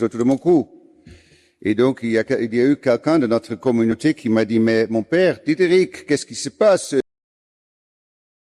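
The audio has compressed frames skipped at 3.91 to 3.93 s and at 6.83 s: each time about 40 ms vanishes, fitting two 20 ms frames, so the audio jumps ahead. It also has a cut-off end at 7.00 s, where the sound stops mid-event and drops straight to digital silence with no decay, since the final buffers were never written.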